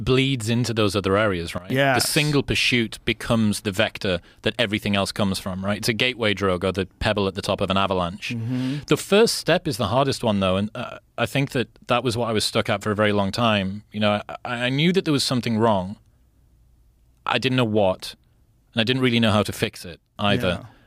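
A gain setting was likely applied without a ramp, so the speech and its background noise drop abruptly together, by about 15 dB from 1.58 to 1.70 s and about 6 dB from 19.64 to 20.16 s: two sudden gain jumps.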